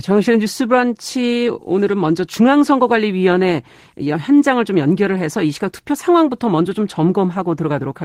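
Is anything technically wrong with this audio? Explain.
Yes. Throughout the speech there is clock drift between sender and receiver: the sender's clock runs roughly five percent fast, so the receiver's buffer keeps overfilling and must shed audio. From 0.08 s to 8.03 s, repeated timing corrections remove short slices to keep pace, so the speech plays at about 104% speed with slight uneven hiccups. A waveform shows small irregular splice discontinuities, and a spectrogram shows faint vertical seams between compressed stretches.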